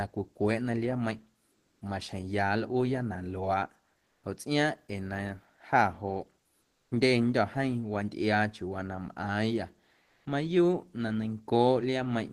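Discontinuous transmission, likely Opus DTX, stopped sending in the speech pauses, so comfort noise replaced the real background at 1.51–1.81, 4.03–4.23, 6.61–6.91 and 10.03–10.25 s (after "wantꞌiaa chiuuwaa na mꞌaaⁿyâ"). Each pause becomes flat, featureless hiss, about 3 dB louder, 2 dB quieter, 2 dB quieter and 6 dB louder respectively.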